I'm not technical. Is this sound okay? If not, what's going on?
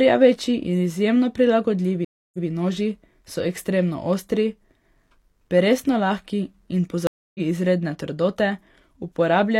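No. A stream reconnect happens twice, at 2.05 to 2.47 s and again at 7.07 to 7.40 s. Each time the connection dropped, the player went quiet for a bit under a third of a second, then reconnected and started decoding afresh. After the first gap the speech picks up about 0.14 s earlier, so a sliver repeats. After the second it jumps ahead by roughly a third of a second, so a small piece is lost.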